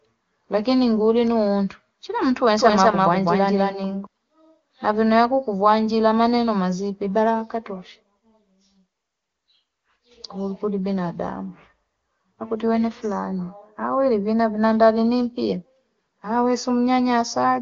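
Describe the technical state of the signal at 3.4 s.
At 3.4 s the speech is heard twice: a second, equally loud copy trails about a fifth of a second behind, dry and full-band, with no room tail. It appears abruptly just after "ngulino untu chila mtu" and runs from 2.59 to 4.07 s. This is a doubled audio track, likely from the same signal being captured again through a slower path and mixed back in. Both copies share the AMR-WB codec's ceiling near 7.2 kHz.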